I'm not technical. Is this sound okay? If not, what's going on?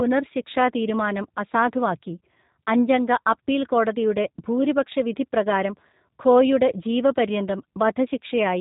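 No. The speech passes through the G.729 codec, a low-rate internet-phone codec, for the whole clip. It rebuilds the voice from a rough model rather than the original, so it sounds slightly rough and synthetic, and nothing above about 3.8 kHz remains, leaving it muffled.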